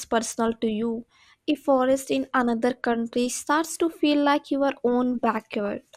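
A brief burbling cuts across the speech from 5.65 to 5.71 s. That is DAB burbling: weak reception let bit errors slip past error correction into the MP2 data, corrupting samples so individual sub-bands picked up short blips of noise, with six frames hit.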